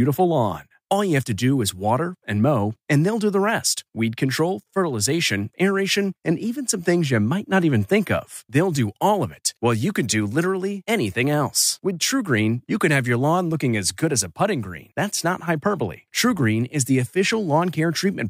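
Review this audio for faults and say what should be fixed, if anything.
Nothing needs fixing; no faults can be heard.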